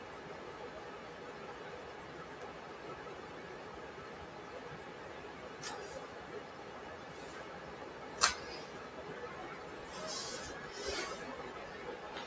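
A noise suppressor designed for speech was left running on this material for the whole clip. It treats sustained tones, ambience and decay tails as noise and pulls them down, while sharper onsets mostly pass. Held sounds and their tails sink by roughly 5 dB and then recover as the next attack arrives, so the level pumps and flutters and the sound thins between onsets. It passed through call microphone processing, and nothing above 8 kHz is present.

At 2.42 s there is a bit error spike: a flipped bit in the digital path knocks two adjacent samples far off their true value before they snap back. It is heard as a single sharp, broadband tick that has nothing to do with the surrounding sound. A second bit error spike at 10.64 s affects just one sample and produces another isolated click of the same kind.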